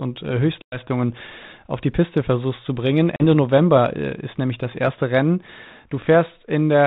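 Packet loss on an ADPCM call: lost packets were filled with silence and the decoder's adaptive predictor slipped out of step. Hard-edged holes open at 0.62 to 0.79 s, after "und äh" (about 100 ms lost), and at 3.16 to 3.22 s, after "versuchst zu bringen" (40 ms). Each ends in a slightly distorted return.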